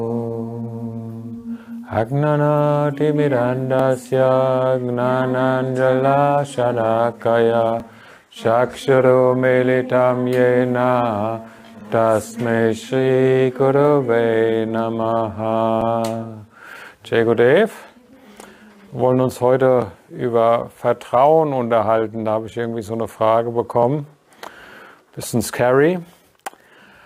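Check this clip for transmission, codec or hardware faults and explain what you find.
There's one fault here: overlapping chunks, with a little stutter at 3.79, 7.80, 11.81, 15.81, 19.82 and 23.83 s. The audio was handled in 4.0 s blocks, and each block starts slightly before the previous one finished, so about 6.5 ms of sound plays twice at every seam. That doubled sliver lands as a short click or hiccup, and because the blocks are evenly sized the glitches come back like clockwork.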